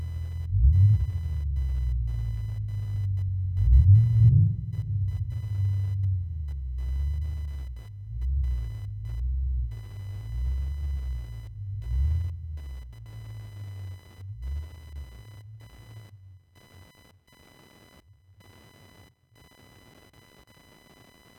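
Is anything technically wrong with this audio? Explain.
Yes. Computer activity noise runs through the whole clip, a buzzing, chirping layer pulsing at around 1 kHz, roughly 30 dB below the sound. The computer's shifting processor and graphics load disturbs the audio circuit's shared ground. A spectrogram shows a line near 1 kHz with harmonics that rises and falls with the computer's activity, and the waveform carries fine, regular ripple even in quiet stretches.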